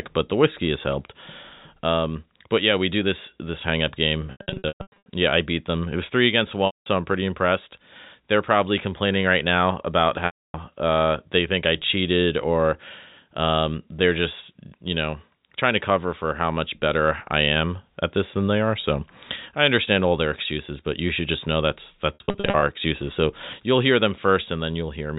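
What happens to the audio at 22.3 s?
Packet loss with pitch repetition strikes between 22.14 and 22.62 s: about 280 ms of audio went missing in pieces scattered over 480 ms, which fits roughly fourteen 20 ms packets, with the longest run at 60 ms. To cover each hole, the receiver repeats the last pitch period and fades it over about 50 ms, so short gaps sound like a held, buzzy tone. The 60 ms run outlasts that fade, sinking briefly toward silence before the speech cross-fades back in.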